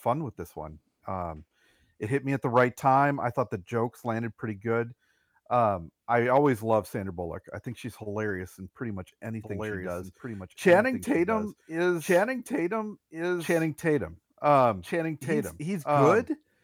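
At 9.4 s, right after "hilarious in pretty much", a doubled audio track begins abruptly and runs to the end. A second full-band copy trails about one and a half seconds behind, somewhat quieter, with no room colour. A slower second capture path is the likely cause.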